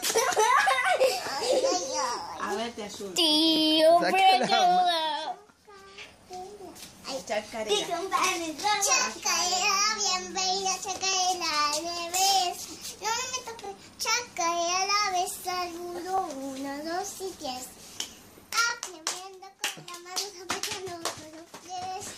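There's a small stutter that recurs all the way through, and it's a case of overlapping chunks. Nine times, from 1.04 s to 21.23 s, roughly every 2.52 s, about 23 ms of audio plays twice. The audio seems to have been cut into 2.5 s blocks, with each new block starting slightly before the previous one ended, so every join repeats a sliver and you get that regular click.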